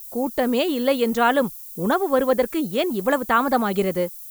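Throughout the speech, low bit depth with noise shaping leaves a steady thin hiss, about 20 dB under the signal. It rises sharply toward the top, unlike plain 7-bit rounding's gritty, level-following distortion.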